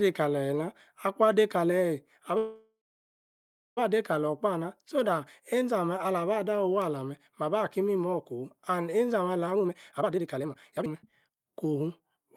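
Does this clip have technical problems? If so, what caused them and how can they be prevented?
Yes. A call audio freeze runs from 2.37 to 3.79 s. The sound stretches into a fading buzz and then about one second of silence before resuming, with nothing lost. This was likely caused by delayed packets draining the jitter buffer. A more stable network path or a deeper jitter buffer would prevent it.

A jitter buffer speed-up runs from 9.46 to 12.24 s. The speech plays at about 148% speed at unchanged pitch, as repeated pitch-period cuts remove about one and a half seconds of backlog. Gentler, slower buffer-draining settings would prevent this rushed delivery.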